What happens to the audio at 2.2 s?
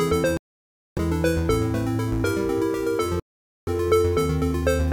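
Nothing goes wrong at 2.2 s; the audio carries straight through that moment without any dropout, click or distortion.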